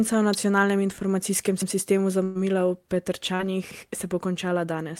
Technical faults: electrical switching spike; overlapping chunks; burst of packet loss; short concealed packet loss

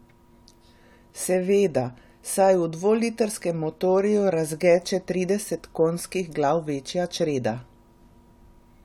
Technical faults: none

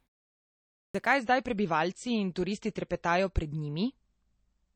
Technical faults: clipped start after a pause; adaptive stream at a lower bitrate

